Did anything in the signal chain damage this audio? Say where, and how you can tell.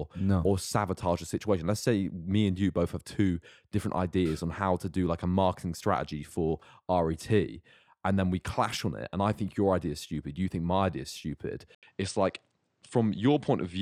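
Yes. Right after "my idea is stupid", at 11.75 s, the sound drops out for about 80 ms and then comes back duller and narrower through to the end, with nothing above 9.4 kHz and a faint new background noise sitting well under the speech, while the level stays roughly the same. The likely cause is an input switched to a poorer device at the driver stage: the system changed its input mid-recording, and the replacement passes a narrower band with its own noise floor.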